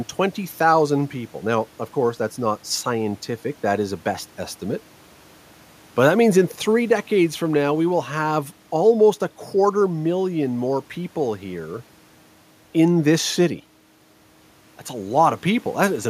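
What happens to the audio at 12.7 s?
At 12.7 s the audio is intact, with the speech carried cleanly over a faint room noise sitting about 34 dB below it.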